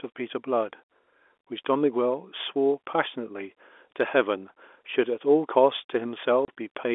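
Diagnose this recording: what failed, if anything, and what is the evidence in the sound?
Network stage: packet loss filled with silence. A 30 ms hole at 6.45 s cuts the speech with hard edges, which fits one lost packet replaced by zeros.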